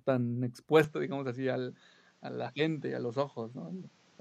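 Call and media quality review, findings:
Speech turns dull and band-limited from 0.84 s to the end, with no gap at the change. Nothing above 8 kHz, a quieter level, and a new low noise floor. Likely cause: input switched to a poorer device, such as a headset microphone.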